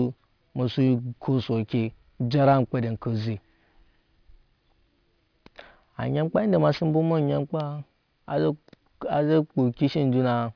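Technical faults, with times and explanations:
Throughout: aliasing. The sample rate was cut without a low-pass filter first, which fits a drop to about 11 kHz. Everything above the 5.5 kHz fold point reflects back down into the band as false, unrelated tones. Sibilants and other bright consonants sound gritty and metallic. The folded energy sits about 25 dB below the speech. The spectrum runs right up to 5.5 kHz with no roll-off.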